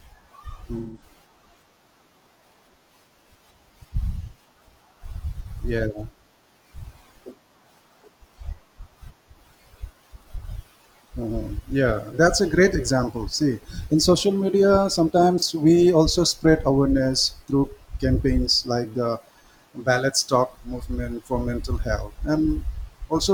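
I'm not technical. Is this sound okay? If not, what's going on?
No. This is AAC frame loss with concealment: small chunks of audio got lost, and the player patched each gap by guessing from the sound just before. That leaves brief smeared, noisy blurs at 0.78–1.02 s, 11.40–11.46 s, and 15.38–15.43 s, between "in social media" and "we also spread awareness".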